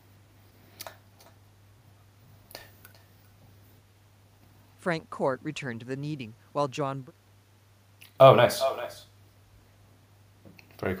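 Right through the clip there's echo with no canceller: the far end's speaker bleeds into its mic, so each phrase returns around 400 ms later, about 13 dB down and thin.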